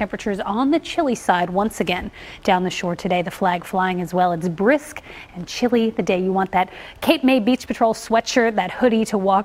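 No technical faults are audible anywhere in the clip.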